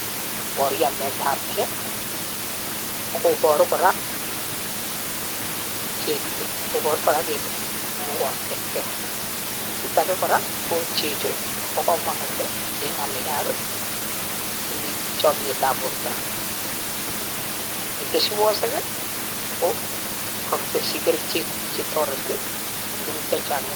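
The speech signal comes through intact and continuous, with the microphone's room background sitting about 8 dB below the voice as part of the recording itself.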